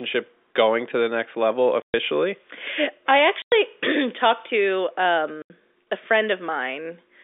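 At 1.82 s, 3.42 s and 5.42 s the speech drops out for 120 ms, 100 ms and 80 ms, a sign of packet loss filled with silence. The receiver played dead air where audio never arrived, so each hole has hard edges. All three lengths are multiples of 20 ms, which fits 20 ms packets lost in short runs. The telephone-band G.711 sound of the line continues on either side of each gap.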